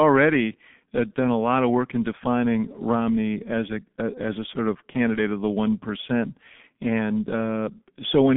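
Throughout the speech, a G.723.1 codec muffles and roughens the sound: nothing survives above 3.7 kHz, and a heavily coded, hoarse quality fits a 6.3 kbit/s stream. Unlike a plain 150 Hz to 3.5 kHz phone line, consonants smear because the slowly updated voice model blurs them.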